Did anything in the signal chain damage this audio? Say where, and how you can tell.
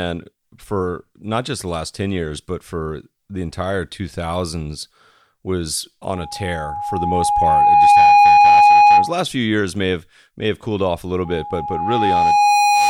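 Yes: loudspeaker feedback squeal, in the analogue stage where the microphone picks up its own loudspeaker. After "entire two thousands was" at 6.14 s, an 824 Hz tone swells over about two seconds to well above the speech, stopping at 9.18 s before "few years may have". It returns after "cooled off a little" at 11.25 s and builds for roughly a second and a half to the end. Unlike steady mains hum, it grows by itself, because loop gain at 824 Hz exceeds one.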